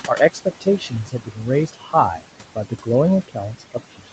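Throughout, noise suppressor artifacts pull the room noise down by about 17 dB between phrases, so the noise sinks between words and rises under them; the spectrogram shows the noise floor pumping in patches frame by frame. Speech cut by the noise suppressor follows at 0.31–1.49 s, 1.67–1.94 s, 2.55–2.89 s and from 3.28 s to the end, where soft sounds were treated as noise and dropped by about 14–17 dB. Around 0.7 s, 0.2 s and 0.15 s of the first three spans sound swallowed, visible as sudden dips in the waveform envelope.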